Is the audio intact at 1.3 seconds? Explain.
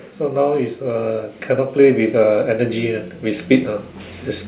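No. At 1.3 s the clip is inside an automatic gain rising span running from 0.19 to 3.79 s: the gain control, hearing a quiet input, steadily lifts its gain by about 11 dB, so speech and background swell together. The waveform envelope widens gradually, and the spectrogram brightens uniformly below the 4 kHz ceiling of the call codec.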